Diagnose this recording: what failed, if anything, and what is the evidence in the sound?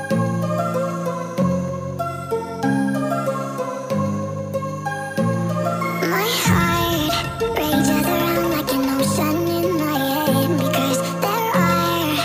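Nothing in the signal chain has failed: the audio is continuous and stable throughout, with no breaks, level jumps or added noise to point to any stage of capture, conversion, transmission or playback.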